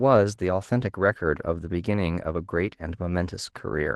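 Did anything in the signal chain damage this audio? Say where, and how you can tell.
Yes. Opus voice compression affects the whole clip, at the codec stage. The speech sounds hoarse and slightly robotic. That fits a low bitrate around 16 kbps, where SILK's linear-prediction coding carries the lower band and a thin CELT layer fills the top, both coded too sparsely.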